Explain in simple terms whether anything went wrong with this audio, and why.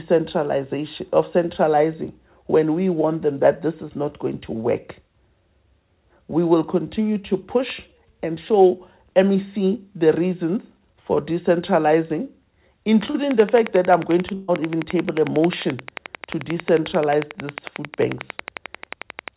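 Yes, three things went wrong.

At 13.1 to 13.16 s there is a short concealed packet loss. About 40 ms of audio never arrived in time, so the receiver filled the gap by extending the sound just before it. You hear a brief smear or wobble.

From 13.31 s to the end, a train of clicks runs steadily at about 11 clicks per second, each standing clearly above the sound. The clicks are regular and look alike, so the likely cause is electrical interference or a faulty connection or power supply.

At 14.34 to 14.50 s comes a burst of packet loss. About 140 ms went missing in a row. The receiver held and faded the last sound to cover it, so you hear a drawn-out buzz or hiss, and then the audio jumps ahead with that stretch gone.

The call link itself has the narrow, phone-like sound of a standard telephone codec, with nothing above 4 kHz.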